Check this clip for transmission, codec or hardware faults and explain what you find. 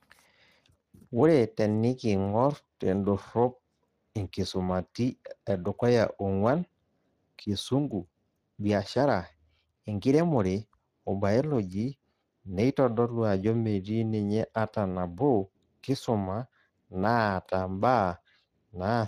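One fault runs through the whole clip: Speex codec damage. The speech sounds plainly coarse and hoarse from start to finish, with a grainy, noisy edge on the voiced sounds, and nothing is heard above 15.2 kHz. Speex is a CELP coder: it models the vocal tract with a filter and spends its limited bits on the excitation signal driving it. The roughness here fits a bitrate around 22 kbps, where that excitation is only approximately rebuilt.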